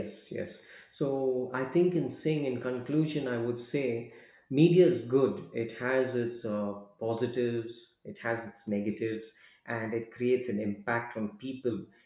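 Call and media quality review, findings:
Nothing to flag here, the speech comes through without any audible problem anywhere in the clip.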